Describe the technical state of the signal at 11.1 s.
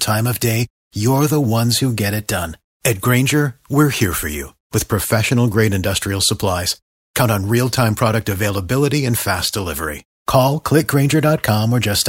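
At 11.1 s the speech signal is intact, with no technical fault present.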